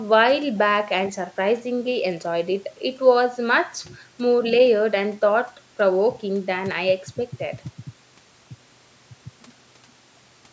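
Nothing goes wrong anywhere in this speech; it just carries the usual signature of a call microphone path, with the deepest bass trimmed off and nothing above 8 kHz, which is simply how that processing works.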